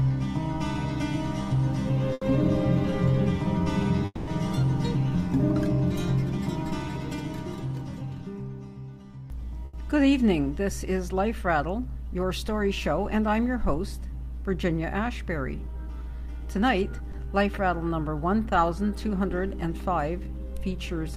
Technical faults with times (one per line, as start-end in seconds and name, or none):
2.13-2.23 burst of packet loss
4.05-4.29 long network dropout
9.65-9.75 burst of packet loss
17.11-17.15 short concealed packet loss